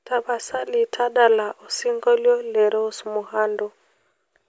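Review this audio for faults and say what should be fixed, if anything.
Nothing stood out on listening, so there is nothing here that needs fixing.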